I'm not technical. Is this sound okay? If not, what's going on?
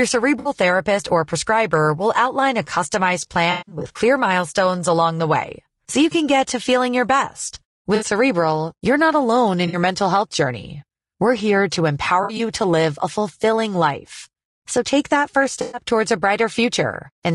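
No. Throughout, the speech sounds rough and grainy, with a hiss sitting between the tones and a dull, artificial-sounding top end. This is low-delay AAC compression, likely from a video-call style codec squeezing the audio too hard. Unlike the dropouts below, it never comes and goes.

There are also brief smeared, noisy, phasey patches where pieces of audio went missing and the decoder guessed to fill the gap. This is AAC frame loss with concealment. It happens at 0.39–0.49, 3.51–3.99, 7.95–8.05, 9.67–9.77, 12.23–12.4 and 15.61–15.82 seconds. The 3.51 one is the longest, with the worst gap lasting roughly a sixth of a second.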